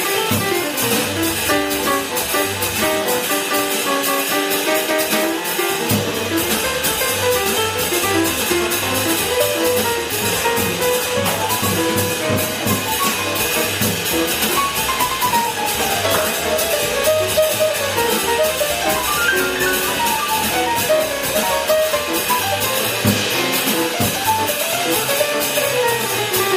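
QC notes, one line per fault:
throughout, MP3 compression: watery, swirly sound with metallic chirps and smeared attacks, likely from heavy encoding near 64 kbps; spectrogram shows flickering gaps.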